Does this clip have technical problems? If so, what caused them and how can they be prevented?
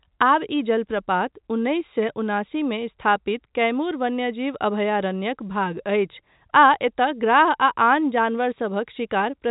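No, nothing here needs fixing: the speech just comes through G.711 telephone coding, which is why everything above about 3.8 kHz is missing.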